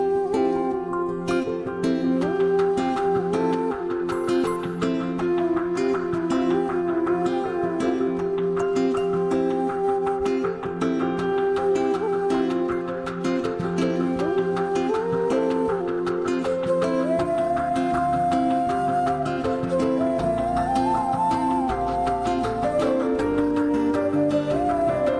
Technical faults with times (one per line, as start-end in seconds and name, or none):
none